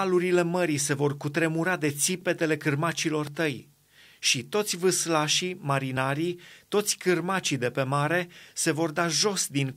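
Speech clip with a single loud pop at about 3.27 s, between "cutremura de țipetele cârmacilor" and "tăi și toți vâslașii", a sharp thump somewhat louder than the voice, likely a plug, switch or static glitch.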